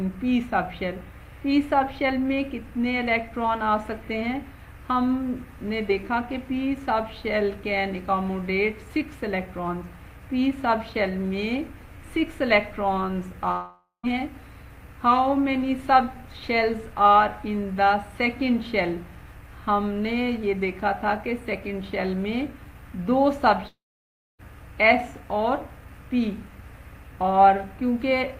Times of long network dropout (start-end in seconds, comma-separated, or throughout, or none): 13.51-14.06, 23.67-24.41